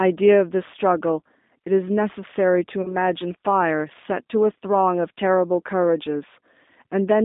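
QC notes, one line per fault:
Throughout: G.729 codec. The sound is rebuilt from a vocal tract filter, a pitch predictor and sparse pulses rather than sent as a waveform. This gives it the slightly rough, synthetic grain of a low-rate CELP coder, which fits roughly 8 kbit/s. The line band runs from 200 Hz to 3.7 kHz. On a spectrogram, energy stops abruptly at 3.7 kHz with nothing above, there is a clear gap below 200 Hz, and harmonics look smeared and blotchy between frames.
2.82–2.97 s: VoIP packet loss concealed by the speech codec. About 20 ms of audio went missing, which points to a single lost packet. The decoder filled the gap by extending its last pitch and filter settings at falling gain, so the sound briefly stretches into a buzzy tone or coloured noise that fades. Because each frame builds on the one before, the sound stays weak or distorted until about 2.97 s.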